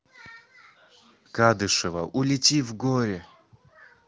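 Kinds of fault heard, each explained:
No kinds of fault are heard in this speech clip.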